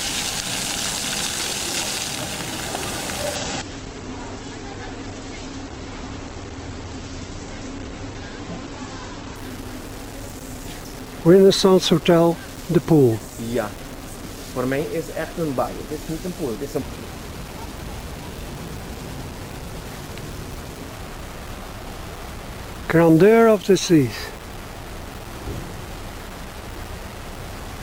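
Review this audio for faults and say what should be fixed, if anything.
Grainy, gritty distortion runs throughout and tracks the sound. It sits only about 15 dB below the signal. Low bit depth without dither is the likely cause, fitting 6-bit rounding. Export at 16 or 24 bits, and dither whenever reducing bit depth.

From 3.36 to 9.36 s, quality drops abruptly without a gap. Nothing remains above 8.2 kHz, and codec artefacts rise. This fits an adaptive stream at a lower bitrate, around 12 kbit/s Opus. Capture from a stable connection, or lock the stream to its highest bitrate.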